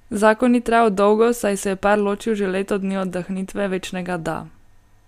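Speech recording, with no technical faults heard anywhere in the clip.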